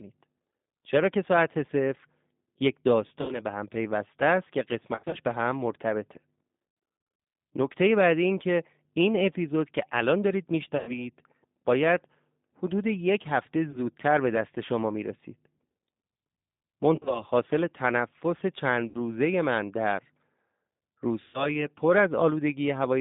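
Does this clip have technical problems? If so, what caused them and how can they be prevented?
Yes. The whole clip of speech carries G.729 codec damage that is plainly audible. The line is confined to roughly 150 Hz to 3.7 kHz, and the speech has a rough, slightly synthetic grain, which fits an 8 kbit/s G.729A stream rebuilding each frame from a vocal-tract filter, a pitch predictor and a few coded pulses. Plain narrowband filtering would dull the sound without that buzzy, pulse-built texture. A wideband codec such as G.722 or Opus, where both ends support it, prevents this.

The speech codec also conceals VoIP packet loss at 3.21–3.39, 4.95–5.17, 6.68–7.32, 10.77–10.92, 13.71–13.79, 16.96–17.23, 18.89–18.96 and 21.22–21.64 s. The decoder stretches its last pitch and filter into a buzzy, fading tone, and the speech stays weak until it recovers. The longest stretch, 6.68–7.32 s, loses about 420 ms of audio scattered across 640 ms. 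Fixing the network path (QoS priority, less congestion, wired links) or adding forward error correction prevents this.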